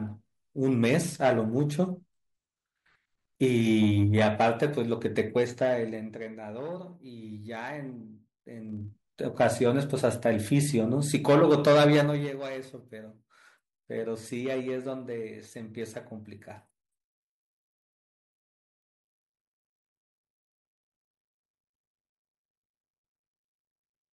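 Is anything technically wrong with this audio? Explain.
Yes. Zipper noise appears twice in this speech clip. From 5.25 to 6.39 s the level drops about 15 dB in 2 dB steps, ticking roughly ten times a second. From 8.64 to 9.01 s it rises about 15 dB, with faster zipping near thirty steps a second. Each unsmoothed jump leaves a small click. That stepped texture separates it from a smooth fade, whose level glides without ticking.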